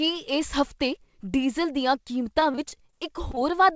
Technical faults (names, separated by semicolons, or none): repeated packet loss (robotic sound)